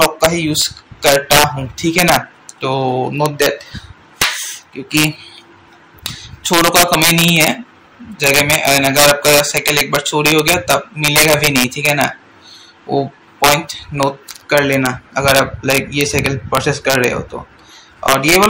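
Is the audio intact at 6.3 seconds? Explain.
No. At 6.3 seconds, as across the whole clip, loud peaks break into violent cracks far harsher than clipping. This is integer overflow: a gain pushed about 8 dB too hot sends a small fraction of samples past the integer limit, and they wrap to the opposite sign.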